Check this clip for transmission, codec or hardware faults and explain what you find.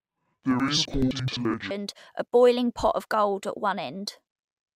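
There's one fault here, right at the start. From 0.00 to 1.74 s the speech suffers interleaved audio read as planar: each 85 ms block, which fits a 4096-sample block, has its alternating left-right samples split into halves and played at half speed. You hear the voice an octave down, doubled, and choppy at roughly 11.7 Hz.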